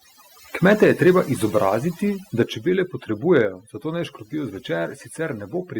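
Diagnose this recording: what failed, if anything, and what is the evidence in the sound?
Overdone noise removal runs through the whole clip, at the call-processing stage. The background drops and breaks up into twinkling specks. The suppressor is cutting frequency bands it judges to be noise, and quiet parts of speech vanish too.

Microphone overload appears from 0.65 to 1.11 s and again from 3.36 to 3.41 s. The loudest peaks turn harsh and crackly. They sit about 4 dB and about 2 dB over the converter's limit. The likely cause is excessive input gain flattening peaks at the converter, touching a small fraction of samples.

Microphone volume stepped down three times: at 0.84 s by 3 dB, at 2.43 s by 3 dB, and at 3.45 s by 4 dB. Speech and background drop together in one abrupt step. Two drops follow distorted peaks closely. This is likely call-processing gain control lowering the device input level.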